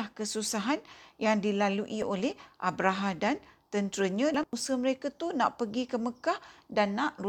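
A corrupt FLAC frame runs from 2.02 to 2.20 s: flipped bits went past an unchecked checksum, so the predictor rebuilt the speech from wrong values across what sounds like two frames, producing an error peaking at about -20 dBFS until clean decoding resumes.

Compressed frames skipped at 4.34 to 4.53 s, between "dan tenteranya" and "mereka tu nak pergi": whole frames never reached playback, so the speech jumps ahead by roughly 400 ms, and the lossless frames join with a hard click.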